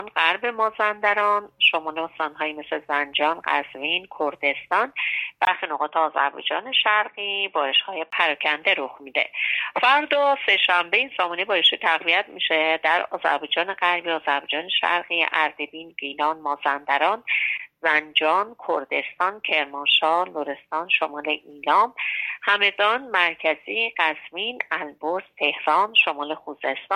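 At about 5.45 s there's a 20 ms gap, then the sound goes dull and boxy, with nothing above 3.8 kHz, plus faint new noise sitting well below the signal, though the level barely moves. It clears up again at about 8.12 s. That combination points to the input switching to a poorer device, likely a headset's call profile or a cheaper mic, with its own narrow band and noise floor.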